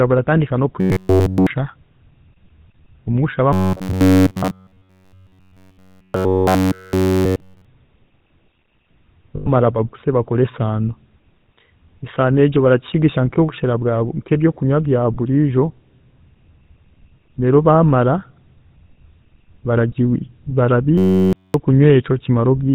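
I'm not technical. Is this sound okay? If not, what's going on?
No, it isn't. Three problems can be heard.

First, the whole recording has the sound of the GSM full-rate codec, the compression used by early mobile phones. It rebuilds the voice from a rough model, driven by a coarse stream of pulses. Everything above 4 kHz is gone. So the speech sounds muffled at the top and has a buzzy, gravelly roughness all the way through. The damage is plainly audible.

Second, there is robotic sound from repeated short buffers. It happens from 0.80 to 1.47 s, from 3.53 to 7.65 s, and from 20.98 to 21.54 s. In these stretches the voice turns into a hard, metallic buzz with a fixed pitch of about 94 Hz. It still roughly follows the speech. The likely cause is audio arriving too slowly, so the player keeps repeating a tiny slice of about 11 ms, and all the sound there is roughly repeats.

Third, there are lost GSM frames from 9.36 to 9.49 s, just before "baguse bakore ensaano". 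About 0.1 s of the signal went missing. The phone system filled the gap by stretching out the last good sound, so you hear a brief rough, metallic ring instead of the real speech.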